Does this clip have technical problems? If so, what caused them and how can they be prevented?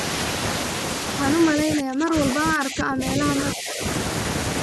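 Yes. The speech is suppressed in double talk three times: 1.54 to 2.16 s, 2.34 to 3.22 s, and 3.54 to 3.82 s. The voice sinks sharply in the first stretch, by roughly 25 dB. The later dips are shallower. This is likely an echo canceller that could not tell its own talker from loudspeaker echo while both sides spoke, so it turned everything down. Tuning the canceller's double-talk detection, or using a headset to reduce echo, would prevent it.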